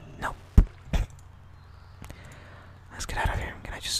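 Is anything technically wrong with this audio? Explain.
Yes. Wi-Fi interference runs through the whole clip. A nearby Wi-Fi radio's beacon, sent every 102.4 ms, is picked up and rectified by the audio circuit. It sounds like steady ticking, about ten times a second, faint, roughly 40 dB below the sound.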